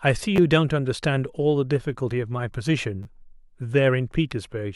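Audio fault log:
0.36–0.38 s and 3.03–3.05 s, repeated buffer: the same brief slice of speech plays twice more when fresh audio arrives late, a stutter heard as a click or quick buzz that fits a 10 ms buffer and drops about 20 ms. On a waveform, identical 10 ms segments repeat with hard joins, and the spectrogram shows vertical seams.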